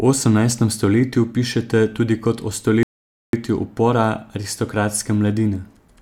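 At 2.83 s, right after "pišete tudi kot o", the speech stops dead for 0.50 s, a rebuffering stall: playback ran out of downloaded audio and waited. Unlike a dropout, it resumes at 3.33 s exactly where it paused, skipping nothing and only adding time.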